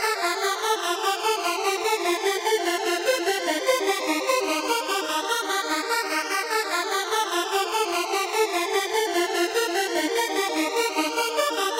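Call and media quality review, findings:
Nothing to flag here; the audio came through without any faults worth a ticket.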